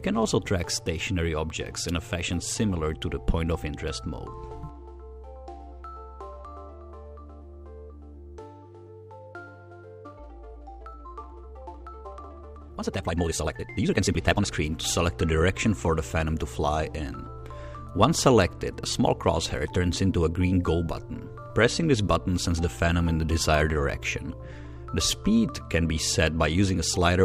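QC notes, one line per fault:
10.00–14.52 s, time-stretched section: pace abruptly rushes to 1.93 times speed while pitch holds, likely software dropping short pieces to shorten the audio.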